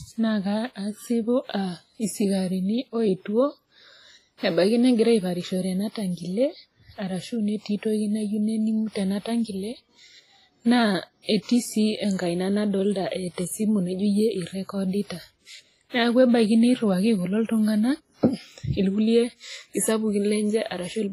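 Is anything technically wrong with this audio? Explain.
Yes. WMA compression, likely the cause, runs throughout the speech, with heavy damage: nothing above 15.2 kHz, smeared transform blocks spreading quantisation noise over tens of milliseconds, and weak components dropped, which fits a low bitrate near 24 kbps. It sounds ringing and washy, with hiss breathing alongside the voice.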